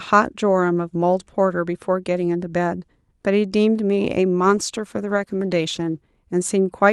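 Call bitrate drop from 4.4 to 6.06 s in this speech clip: the coding turns coarse and rough, consistent with the Opus encoder falling from 64 kbps to around 18 kbps.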